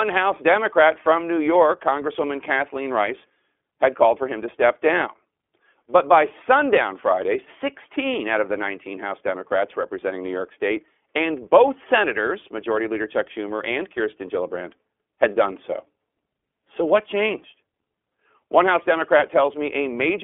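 A speech recording carrying iLBC codec damage from start to finish, plainly audible as a rough, slightly synthetic edge on the voice. Each 20 ms frame is coded independently, which fits the codec's 15.2 kbps mode. The band is telephone-narrow, roughly 300 Hz to 3.4 kHz. On a spectrogram, energy stops at a hard ceiling near 3.6 kHz with nothing above it, and the low end thins below about 300 Hz.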